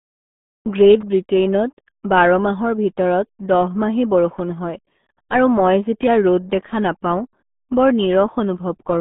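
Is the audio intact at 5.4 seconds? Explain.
No, at 5.4 seconds the speech is running through the same RealAudio 14.4 codec damage that covers the whole clip. The sound is squeezed into a narrow line band of about 150 Hz to 3.6 kHz, with nothing above 3.8 kHz. The heavy quantisation leaves it muffled and gargly. That fits a codec crushing everything down to around 8 kbit/s for dial-up modems.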